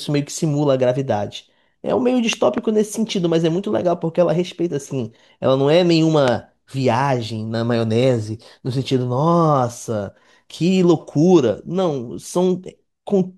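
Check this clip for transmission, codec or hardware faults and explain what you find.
A loud pop fault occurs twice in the speech. Between 2.33 and 2.60 s there are two sharp pops in quick succession, and a single pop falls at 6.28 to 6.30 s. Each peaks roughly 15 dB above the speech, which carries on underneath. The likely cause is a voltage step or pulse, from a plug, switch, static or driver glitch, that gets shaped by later circuitry. On a waveform these look like tall, narrow spikes. On a spectrogram they appear as bright vertical broadband lines.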